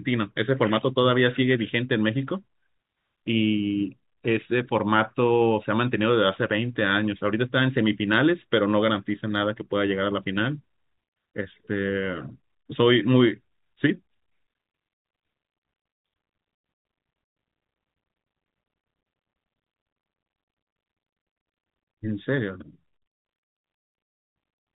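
No technical faults are audible.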